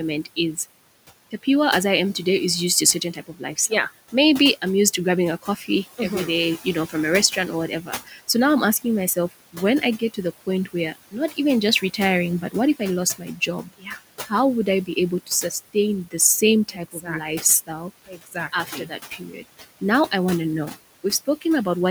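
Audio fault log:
throughout: noise suppressor artifacts. The room noise sits about 17 dB below the speech. The suppressor pulls it down by about 17 dB wherever it judges a band to be steady noise. It works frame by frame, so the background drops away in the gaps between words and comes back up underneath them. The noise floor therefore pumps with the speech rather than staying level.
3.13–5.99 s, 6.65–8.29 s, 8.82–20.12 s: speech cut by the noise suppressor. Here the suppressor mistakes parts of the speech for noise and turns them down along with the background. The deepest drops are about 13 dB, 15 dB and 16 dB in turn. The affected parts add up to roughly 0.4 seconds in the first range, about 0.3 seconds in the second, and about two seconds in the third. Those parts sound swallowed or faint.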